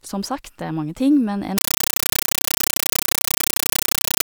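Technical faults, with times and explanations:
1.58–4.25 s, compressed stream played as audio: from 1.58 s the speech gives way to loud, harsh chattering static, because a Dolby Digital (AC-3) bitstream is being treated as plain samples rather than decoded; the density fits roughly 384 kbps. Each data frame becomes an 8.0 ms noise burst followed by silence, repeating 31.25 times a second. A waveform shows dense noise blocks separated by flat near-silent gaps, and a spectrogram shows evenly spaced broadband vertical stripes.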